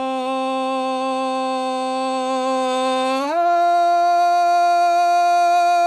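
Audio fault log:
Throughout: clock drift between sender and receiver. The sending clock runs roughly 5 percent slow compared with the receiver's. The receiver's jitter buffer keeps draining, so it must keep stretching the music to avoid running dry. The result is a steady trickle of small timing hiccups across the whole clip, unevenly spaced rather than regular, which gives the playback a faintly unsteady pulse instead of one obvious glitch.
0.12 to 5.74 s: repeated timing corrections. To keep pace with the slow sender, the receiver repeatedly inserts short repeated slices of audio. Playback effectively runs at 96 percent speed over this stretch, and the edits add around 300 ms in total. Every correction pushes the same way, lengthening the music, but the spacing is uneven. Each one is tiny, so it registers as a slight stumble in tempo rather than a clear jump.
0.01 to 1.24 s: scattered short gaps. 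A few packets, around three, arrived too late or not at all. The receiver bridged each hole by extending the preceding sound, with the longest patch only a few milliseconds. Barely one percent of this span is filled in, so the music stays clear, with at most a faint tick or smear at each repair.
3.22 to 5.64 s: scattered short gaps. Another cluster of around five late or lost packets, this time with slightly longer patches, the longest about 10 ms and roughly 30 ms concealed overall. The continued sound shows up as brief smears or small hiccups in the music. The Opus call codec's treble roll-off, which fits a 12 kHz bandwidth, is present alongside.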